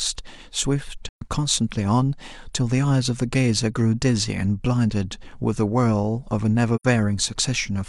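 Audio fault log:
1.09–1.23 s and 6.75–6.85 s, AAC frame loss with muting: the speech drops to silence for about 128 ms, then about 85 ms. Those lengths fit three and then two lost frames of roughly 43 ms each. The decoder zeroes the missing spectra, and the overlapping transform windows taper the surrounding frames into and out of the gap. Each dropout therefore sounds like a soft-edged hole with smooth fades on both sides.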